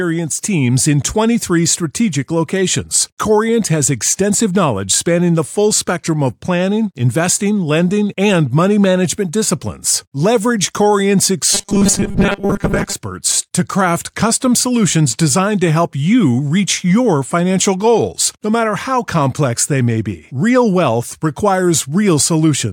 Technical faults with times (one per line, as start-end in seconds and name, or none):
11.55-12.93 robotic sound from repeated short buffers
15.67 corrupt frame decoded